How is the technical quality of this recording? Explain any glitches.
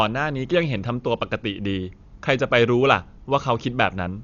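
The quality's pretty rough, since heavy codec damage runs the whole way through the speech. It sounds dull, with nothing above about 6.9 kHz, and there's a rough, fluttery noise hanging around the voiced parts. That's likely Dolby Digital compression at a starved bitrate, something like 48 kbps: the encoder narrows the band and leaves many frequency lines without real detail, and the decoder fills those gaps with noise.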